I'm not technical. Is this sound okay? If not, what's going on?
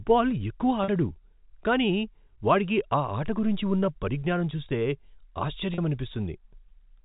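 No. At 0.84 s and 5.74 s the speech holds a buzzy tone for about 0.04 s. That's packet loss with pitch repetition: pieces of the call went missing, and the receiver replayed the last bit of voice, so you hear a smear, not a silent gap.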